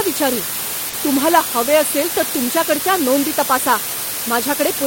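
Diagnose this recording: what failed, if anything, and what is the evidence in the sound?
The hiss comes from sample-format conversion: low bit depth with dither. The speech sits on a constant, even hiss from start to end, nearly as loud as the voice itself, which fits 4-bit samples. It never turns gritty, unlike undithered truncation, because dither turns the rounding error into steady white noise.

From 0.33 s to 2.47 s the speech runs about 5.9% slow and sits about 105 cents flat, roughly a semitone, then snaps back to normal speed and pitch. The likely cause is a drift correction step in the driver or buffer stage, where rate-matching software changed playback speed in one jump. Because speed and pitch move together and return abruptly, this differs from gradual wow or a pitch-only effect.

Around 0.89 to 0.95 s there is a brief smear where about 40 ms of sound is continued rather than heard fresh. 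This is short concealed packet loss on the network path, and the decoder extended the preceding sound to bridge the gap. It differs from a dropout because there is no silence, only a blurred, wobbly patch.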